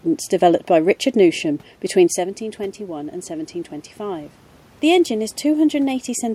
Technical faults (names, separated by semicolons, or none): automatic gain rising